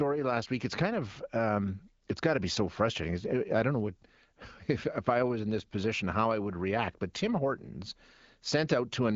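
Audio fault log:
Nothing stood out on listening to this speech, which comes through an AMR wideband (HD Voice) codec path with only light coding and nothing above about 7.5 kHz.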